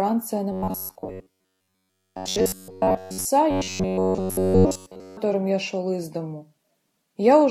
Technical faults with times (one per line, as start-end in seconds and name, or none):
0.52-3.26 robotic sound from repeated short buffers
3.51-5.17 robotic sound from repeated short buffers